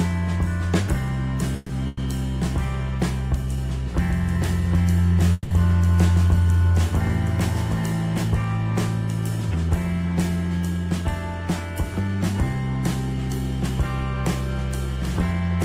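At 1.56 to 1.71 s and 1.87 to 1.99 s, then again at 5.33 to 5.53 s, there is a call audio freeze. The last sound is stretched into a fading buzz for about 130, 100 and 180 ms, likely because packets stalled and the jitter buffer ran dry. Unlike a dropout, the sound then resumes exactly where it stopped, so nothing is lost and only a pause is inserted.

From 3.99 to 8.23 s a doubled audio track runs underneath: a full-band copy about 5 dB quieter trails by roughly 0.7 s, likely a second, slower capture path. It has no decaying tail or room colour, which sets it apart from echo or reverb, and it starts and stops abruptly.

At 10.70 to 11.03 s, 12.01 to 12.35 s and 14.96 to 15.57 s, a jitter buffer speed-up trims tens of milliseconds of pitch periods, running the sound at 115%, 109% and 108% speed. It sounds hurried, but the pitch stays put, unlike simple resampling.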